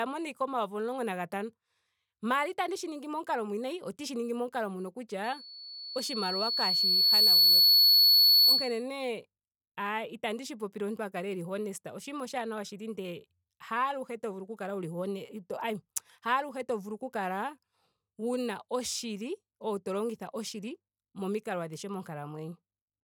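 From 5.24 to 8.83 s a microphone picks up its own loudspeaker, and the loop's gain climbs past unity near 4.4 kHz, causing loudspeaker feedback squeal. That single piercing tone swells over roughly two seconds until it sits about 15 dB above the speech.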